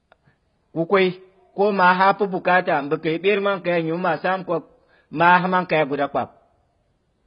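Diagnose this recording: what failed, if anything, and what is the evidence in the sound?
Codec stage: the speech is dull and smeared throughout, nothing above 5.2 kHz, pointing to heavy AAC compression, likely AAC-LC starved near 16 kbps.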